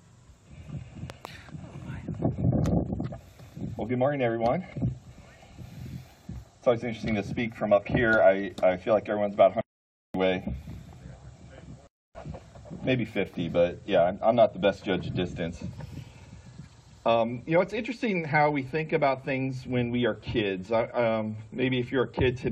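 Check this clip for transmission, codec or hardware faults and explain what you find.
One fault is present: a loud pop between 1.10 and 1.27 s. A sudden voltage pulse, likely from a plug, switch or static discharge, entered the signal chain, producing two sharp pops about 10 dB above the surrounding sound, which carries on underneath.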